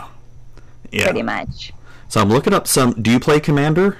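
Speech, and it's hard clipping the whole way through: the signal is pushed about 16 dB past what the chain can pass, so the peaks get sliced flat on something like 7 percent of samples, leaving a harsh fuzz over every louder syllable.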